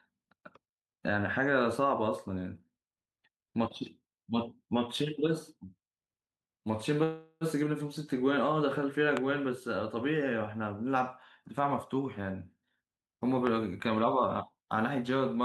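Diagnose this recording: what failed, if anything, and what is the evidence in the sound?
Call audio freeze, 7.03 to 7.44 s: the speech stalls into a fading buzz for 375 ms, then resumes intact, likely packets delayed on the network starving the jitter buffer.

Loud pop at 9.17 s and 13.47 s: sharp single transients about 15 dB above the speech, which continues underneath, likely a voltage step in the analogue wiring.

Jitter buffer speed-up, 13.90 to 15.09 s: speech runs at 106% speed with pitch unchanged as roughly 70 ms of pitch periods are trimmed to cut accumulated delay.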